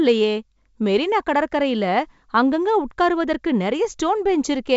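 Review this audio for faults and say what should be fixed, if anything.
Nothing stood out on listening to this speech, and the wideband telephone coding it passes through leaves nothing here that needs fixing.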